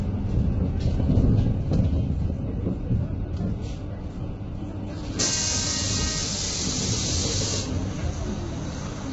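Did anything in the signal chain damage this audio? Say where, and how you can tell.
Yes, at the codec stage: the whole clip sounds heavily coded, most likely by low-delay AAC compression such as AAC-ELD, with a grainy, rough texture throughout and nothing above 7.8 kHz. Short frames smear harmonic detail and fill gaps with noise, consistent with roughly 16 kbps.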